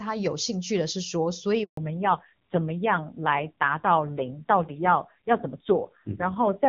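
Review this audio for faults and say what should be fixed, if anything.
A handover gap cuts the speech from 1.63 to 1.77 s: the sound dies away within a few tens of milliseconds and stays silent for 140 ms while the call moves between networks and no speech frames arrive. Unlike a dropout from packet loss, there is no concealment smear, repeated fragment or gradual fade, just a clean hole. Right after it the character of the audio changes for good, which marks a network switch rather than a passing glitch. Preventing this means tuning handover so the new link is ready before the old one is released.

A fallback to narrowband starts at 1.77 s and lasts to the end of the clip. Before it, the wideband HD Voice sound is clear with little or no codec damage. After it, nothing above 4 kHz remains, and the speech turns dull and rough, which points to a low-rate narrowband codec of about 5.9 kbit/s. 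A low-pass filter would only remove the top end. Here the muffling arrives with added raspiness and stays from the handover onward. Keeping both networks configured for wideband codecs would avoid the fallback.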